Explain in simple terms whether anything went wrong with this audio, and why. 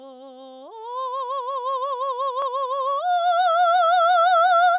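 Nothing went wrong with it.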